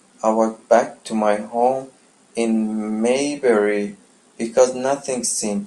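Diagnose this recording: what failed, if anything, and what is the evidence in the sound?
The USB or driver stage stalled at a fixed interval, causing periodic USB or driver dropouts. From 3.84 to 5.59 s, about fifteen skips, each a tiny fraction of a millisecond, repeat every 0.125 s, giving a steady ticking over the speech.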